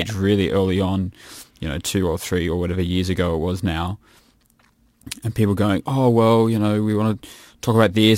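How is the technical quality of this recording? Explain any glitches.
The recording has one fault that runs through the whole speech clip: crude rate conversion. Its sample rate was changed by simply dropping the nearest samples, with no filtering, which fits a conversion from 48 kHz down to 44.1 kHz. The dropped samples recur in a fixed pattern, creating shifted, inharmonic copies of the speech, roughly 30 dB below it, heard as a gritty, inharmonic fizz that tracks loud and high-pitched sounds.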